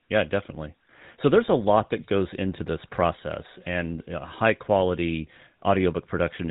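GSM full-rate codec coding runs through the whole of this speech clip, from start to finish, and the damage is plainly audible. The codec rebuilds the voice from a vocal-tract filter fed by regularly spaced pulses, keeping only one excitation sample in three, which leaves a buzzy, gravelly roughness on the voice. Nothing above 4 kHz survives, so sibilants sound dull, and the overall character fits the 13 kbps full-rate mode.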